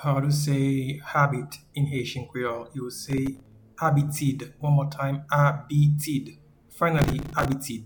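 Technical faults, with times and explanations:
3.06–3.52 s and 6.99–7.52 s, processor overload crackle: the audio tears into gritty crackle while the processor misses many buffer deadlines in a row. Each miss replays a scrap of stale audio with hard edges, and the rapid grain suggests buffers of a few milliseconds, roughly 15 missed in the first burst and about 30 in the second. A spectrogram shows dense vertical broadband streaks through each span, and the waveform shows small abrupt steps and repeated fragments.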